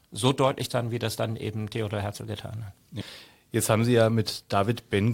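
Damaged data in the compressed stream throws the decoder out of sync twice, forcing it to hunt for the next valid frame. This speech gives a brief glitch at 0.70 s, between "so deutlich" and "wie das dann eben", and another from 3.00 to 3.02 s, after "getan hat".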